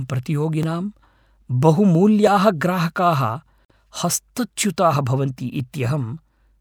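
Regular clicks start at 0.63 s and recur about every 1.64 s through 5.6 s, roughly four in all. These are clock drift buffer slips, likely from two devices' clocks disagreeing by around a thousandth, so the buffer periodically drops or repeats a block of several dozen samples.

At 3.65 s the speech stops dead for about 50 ms, resuming at 3.70 s where it left off. This gap at a join of encoded pieces comes from encoder start delay and last-frame padding left in when separately encoded sections, apparently 4 s long, were joined.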